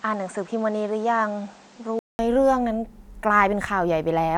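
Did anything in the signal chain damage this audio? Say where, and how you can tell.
Yes. At the input stage, the recording likely began on a poorer device and then switched inputs at 2.19 s. Until then the speech sounds dull, with nothing above 8.9 kHz and a faint extra background noise well beneath it. A 200 ms silence marks the switch, with loudness unchanged.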